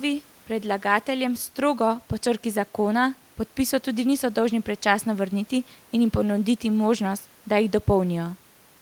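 Listening through this speech recording, nothing stood out as a technical problem, with only faint room noise sitting about 34 dB below the speech.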